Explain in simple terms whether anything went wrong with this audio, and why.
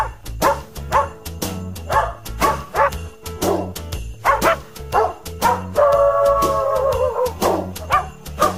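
Nothing went wrong with this audio. There is no point in the clip where the sound breaks, drops out or changes in a way that points to a technical problem.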